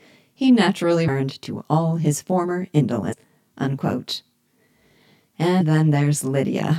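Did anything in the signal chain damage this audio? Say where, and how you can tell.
Yes. At mixing or playback, one channel arrives about 20 ms late and is summed to mono, which causes comb filtering. Fixed notches start near 30 Hz and appear as steady stripes across the spectrogram.

In the codec or storage stage, compressed frames were skipped at 1.07 s after "he naturally", at 3.11–3.13 s after "to all his former", and at 5.60 s. Roughly 200, 300 and 150 ms of 23.2 ms frames vanish, so the audio jumps ahead at each point.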